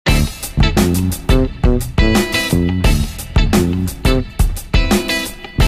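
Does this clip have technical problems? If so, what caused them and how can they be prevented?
No, there's nothing here that points to a technical problem, so there's nothing to trace back or guard against.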